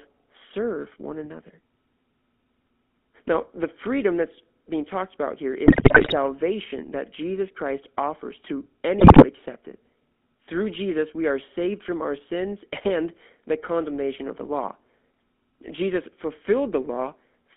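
GSM full-rate codec coding runs through the whole speech clip. The voice is squeezed into a telephone band of roughly 200 Hz to 3.5 kHz and rebuilt from a vocal-tract model excited by coarse, regularly spaced pulses. That thinned-out excitation gives the plainly audible buzzy, gravelly roughness, and the sound suggests the 13 kbps full-rate coder rather than a later one.

GSM bit errors hit from 5.66 to 6.14 s and again from 9.00 to 9.25 s. Corrupted bits reach the decoder, so the filter, pitch and gain values for the affected frames come out wrong. The voice breaks into squawks, pops and gargling bursts. The damage is dense enough in both stretches to point to a heavy error rate on a weak link, with the second burst shorter but at a higher error rate.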